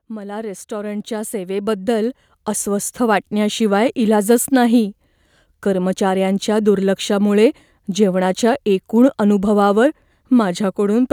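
From 0.07 s to 3.66 s the level climbs steadily by about 13 dB: automatic gain rising. The gain control judged the input too quiet and raised its gain step by step, so speech and background noise swell together until the ramp settles just before "इलाजच नाही".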